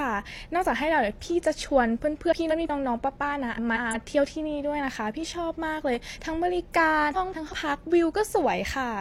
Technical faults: frames out of order

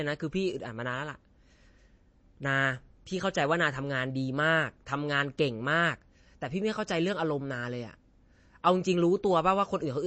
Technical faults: MP3 compression

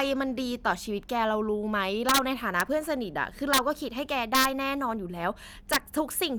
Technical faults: integer overflow

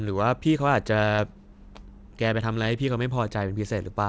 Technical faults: short concealed packet loss

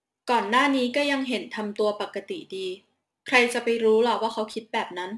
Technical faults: aliasing

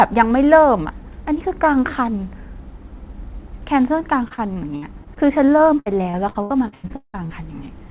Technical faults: repeated packet loss (robotic sound)

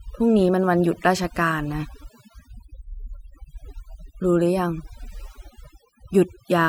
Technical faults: overdone noise removal

